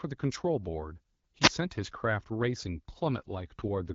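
A speech clip carried over an AMR-WB (HD Voice) link. Around 1.42 to 1.49 s the wireless microphone's signal fades enough for the receiver squelch to cut in, a wireless microphone squelch dropout heard as a brief lift of hiss and a momentary mute of about 4 ms. From 3.18 s to the end, the network forces an AMR rate drop, trading codec bits for error protection, and the voice turns rougher and more synthetic with no gap or loss of bandwidth. This fits a step down from 12.65 to 8.85 kbit/s.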